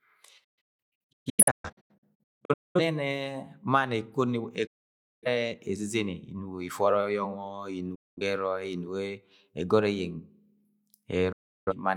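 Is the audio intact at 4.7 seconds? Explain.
No. At 4.7 seconds the speech is inside a digital broadcast dropout that runs from 4.66 to 5.27 s. The receiver stopped getting usable frames, either because the signal was lost or because frames failed their checksum, so it muted its output. The sound fades to silence over about 8 ms, and roughly 0.55 s of programme disappears before speech resumes at 5.27 s. That gap fits 13 lost frames.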